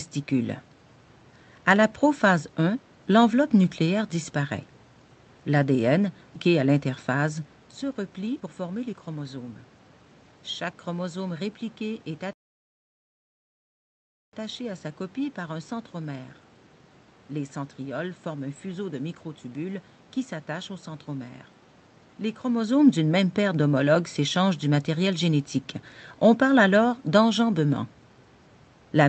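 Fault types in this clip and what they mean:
Jitter buffer speed-up: After "à l'interphase se", from 8.19 to 9.58 s, the speech runs about 15% fast at unchanged pitch. The receiver's buffer had built up excess audio, so it repeatedly trimmed tiny pitch-period slices, roughly a fifth of a second in total.
Playback stall: After "chromosome répliqué est", the output goes silent for 2 s, from 12.33 to 14.33 s. Speech then resumes with "à sa copie par". The likely cause is the player running short of data, or its thread being blocked, until it recovered.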